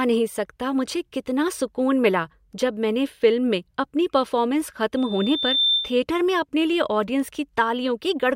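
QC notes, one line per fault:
4.97–6.03 s, loudspeaker feedback squeal: mic-to-speaker loop exceeds unity gain at 3.6 kHz, so a tone swells over roughly 0.7 s to about 5 dB above the speech, between "फ़िल्म में अपनी परफ़ॉर्मेंस" and "में अपने लिए ऑडियंस".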